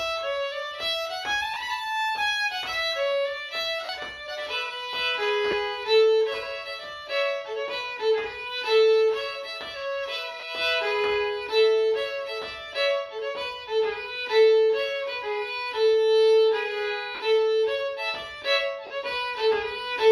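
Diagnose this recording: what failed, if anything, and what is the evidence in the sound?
Lost LE Audio frames on the Bluetooth link: short noisy smears at 1.54, 3.85, 5.51, 10.40, 17.15 and 18.87 s, each 20 to 50 ms. The decoder filled each gap with sign-scrambled repeats rather than hard silence, which is what separates this from a plain dropout.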